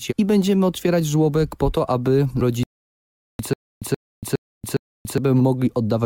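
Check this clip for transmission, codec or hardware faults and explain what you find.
Two playback faults are audible, both from delivery rather than from the codec or the hardware.

From 2.63 to 3.39 s there is a rebuffering stall. The player ran out of buffered audio and waited for more. The sound drops to silence, then resumes exactly where it stopped. Nothing is lost, but about 0.76 s is added.

From 3.53 to 5.18 s comes a stutter with silent gaps. A 127 ms fragment plays, then 284 ms of digital silence follows. This repeats four times at an even 411 ms pace. The likely cause is a stalled stream replaying its last fragment at each retry. The audio due in that span is lost.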